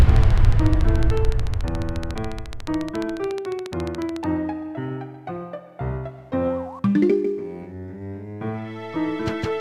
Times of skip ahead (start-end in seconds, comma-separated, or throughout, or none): none